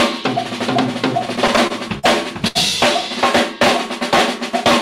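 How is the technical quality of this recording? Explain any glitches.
The recording has two network-delivery glitches, both within the first three seconds.

From 1.25 to 2.05 s there are repeated stalls (stutter). Packets arrived late, so the jitter buffer kept running dry, giving seven gaps totalling 118 ms, the longest 43 ms. The receiver extended the preceding sound each time, so the audio drags and stutters while nothing is lost.

From 2.47 to 2.57 s there is a short stall from a late packet. Delivery slipped by 79 ms and the buffer emptied. The receiver held the last sound for 79 ms, then resumed where it left off, producing a briefly frozen sound with a slight buzz or dip.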